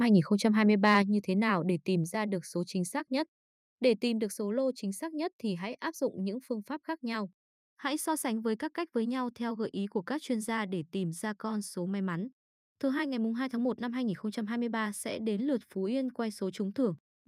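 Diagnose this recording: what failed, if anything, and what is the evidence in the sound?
Between 0.87 and 0.97 s the loudest peak turns harsh and crackly, likely microphone overload at the converter, with input about 2 dB over full scale, flattening some waveform tops.

At 1.02 s, right after that distorted peak, voice and background drop together by about 5 dB in one step, likely call processing stepping the microphone volume down.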